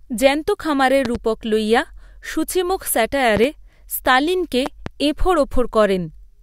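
Loud pops hit at 1.05 to 1.18 s, 3.37 to 3.47 s and 4.66 to 4.89 s. Each is a quick double thump over the speech, which carries on underneath. They peak about 10 dB above the signal, and the middle one reaches about 15 dB. It's likely a voltage spike from a plug, switch or static.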